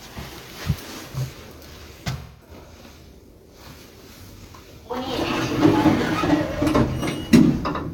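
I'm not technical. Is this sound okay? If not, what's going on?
No. From 2.18 to 2.51 s there's a brief smeared, noisy, hollow-sounding patch. This is AAC frame loss with concealment: about 0.2 s of the compressed audio went missing, which fits roughly five lost frames, and the player covered the gap by reusing and scrambling the last good sound. A plain dropout would give silence or a click. Here the gap is filled with a blurry imitation that's too short to fade away.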